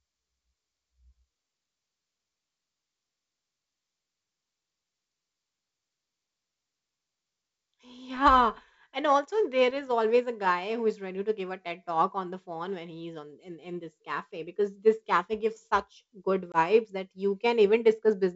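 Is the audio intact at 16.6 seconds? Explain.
No. Packet loss on an ADPCM call cuts a hard-edged 20 ms hole, about one packet, from 16.52 to 16.57 s, between "cafe gives such good" and "that you". The decoder's predictor and step size lose sync, so unlike a clean dropout, speech resumes with brief distortion.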